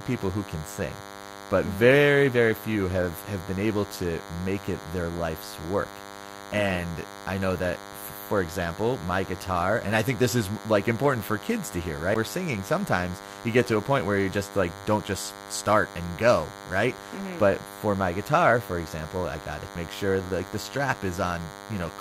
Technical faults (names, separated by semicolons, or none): DECT cordless phone buzz; CD skip